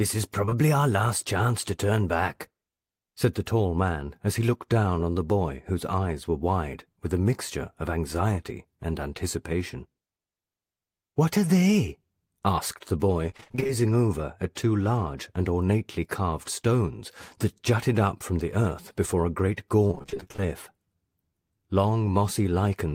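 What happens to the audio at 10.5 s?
Nothing goes wrong at 10.5 s: the speech runs on intact through that moment, with no dropout, click, glitch or other fault.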